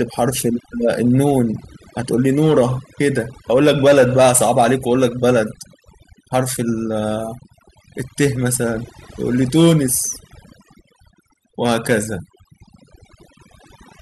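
Overdone noise removal runs throughout: frequency bands near the noise floor are cut hard, leaving twinkling specks in near-silence.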